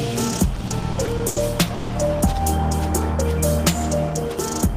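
From 0.55 to 1.38 s the audio stutters through repeated stalls. Packets reach the receiver late, and its jitter buffer empties eight times. Each gap is bridged by continuing the last sound, the longest for 90 ms. About 230 ms is filled, about 28 percent of the span. Nothing is lost, but the sound drags and hiccups.

At 1.74 s comes a call audio freeze, lasting until 1.91 s. The sound holds and fades as a short buzz or hiss for about 150 ms. Packets were likely held up in transit, and the buffer ran dry. The audio then resumes exactly where it stopped, now delayed.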